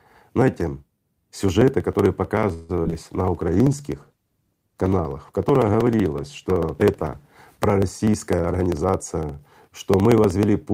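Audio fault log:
0.1–10.7 s, periodic USB or driver dropouts: there's a steady tick every 0.063 s, about 16 a second, riding on the speech. Something is stalling the USB bus or audio driver on a fixed cycle, and each time a sliver of audio gets skipped, so the signal jumps and clicks.
2.53–2.71 s, call audio freeze: the speech hangs for 158 ms as a buzzy continuation of the last sound, then resumes right where it left off with nothing lost. Likely held-up packets draining the jitter buffer, which pushes everything after it 158 ms later.
2.83 s and 2.90 s, short concealed packet loss: two quick smeary blips, each about 30 ms long, covering 20 ms of audio that never arrived in time. The receiver patched each gap by extending the preceding sound and blending back, so it sounds like a brief wobble.
2.98–7.32 s, call bitrate drop: the speech turns dull and watery, with the top end gone, as the encoder falls from 64 kbps to 17 kbps and stays at the bottom for about 4.25 s. 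The drop in bandwidth estimate forced coarser coding and a lower cutoff.
8.39–10.03 s, jitter buffer speed-up: the speech runs at 109% speed with the pitch unchanged, so it sounds a bit rushed. The buffer had built up too much audio and trimmed it by cutting out lots of tiny pitch-period chunks, roughly a seventh of a second in total.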